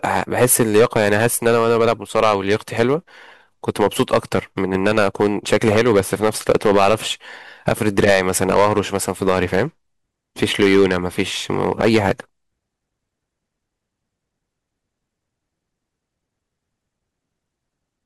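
Hard clipping runs through the whole of this speech recording. The signal was driven about 12 dB past what one stage in the chain could pass, so the loudest peaks are sliced flat. Only a small share of the waveform, somewhere around one or two percent, is affected, but those squared-off tops generate high harmonics that the original speech never contained, heard as a rough, crackling fuzz on the stronger syllables.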